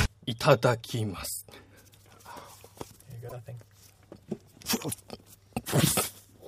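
Broken MP3 bit reservoir, 3.28 to 3.32 s: the audio jumps ahead, and a brief chirp, burst of noise or gap follows. Frames that fit a 26.1 ms frame length were likely cut out, leaving the next frames reading borrowed bits from the wrong place.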